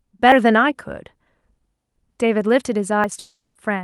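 At 0.32, 1.96 and 3.04 s the speech jumps forward, losing roughly 40 ms each time with no gap of silence. This is likely a dropped buffer (overrun): samples were overwritten before being read, and the two sides were spliced together.

From 3.19 s the sound dissolves into a fading buzz that trails off into a brief silence, and the speech resumes around 3.57 s with about 360 ms missing. This points to a long network dropout, likely, with the receiver stretching the last audio before giving up.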